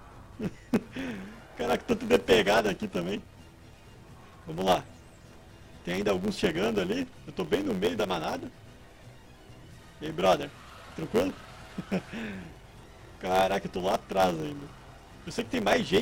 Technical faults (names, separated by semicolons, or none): block size mismatch (truncated)